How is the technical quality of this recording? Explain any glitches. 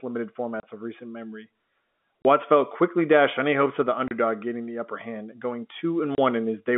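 The speech carries four short dropouts on top of a telephone-band sound limited to roughly 200 Hz to 3.5 kHz.

Packet loss filled with silence, at 0.6, 2.22, 4.08 and 6.15 s: each gap lasts 30 ms, which fits a single lost packet replaced by digital silence. The speech cuts out abruptly, with hard edges on both sides of each hole.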